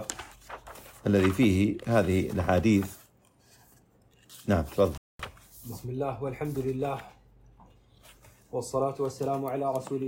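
A rebuffering stall interrupts the audio at 4.98 s, cutting to silence until 5.19 s and adding about 219 ms. The playback ran dry and waited for data. Unlike a dropout, which skips material, it resumes exactly where it stopped, so nothing is missing.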